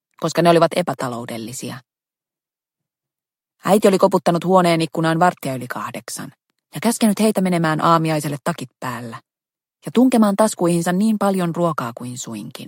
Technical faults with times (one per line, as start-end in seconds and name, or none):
none